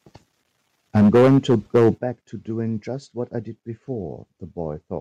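From 0.95 to 1.9 s the speech shows microphone overload. Peaks exceed the converter's ceiling by about 9 dB, and roughly 15 percent of samples are flattened at the limit, so the loudest syllables take on a harsh, crackling edge. The likely cause is microphone input gain set too high.

The microphone volume is stepped down twice. At 0.98 s the voice and background drop together by about 3 dB. At 1.98 s, just after the distorted stretch ends, they drop by about 10 dB. Each change is a single abrupt step, which points to call software likely lowering the device's input volume in response to the clipping.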